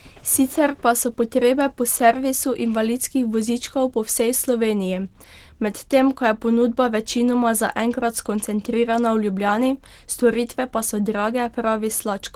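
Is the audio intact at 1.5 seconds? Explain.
No. At 1.5 seconds the speech carries plainly audible Opus compression damage, present throughout the clip. It sounds hoarse and muffled. The likely cause is the encoder's hybrid speech mode, which fits a bitrate near 16 kbps.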